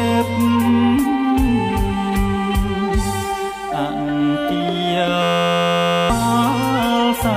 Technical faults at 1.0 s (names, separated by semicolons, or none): none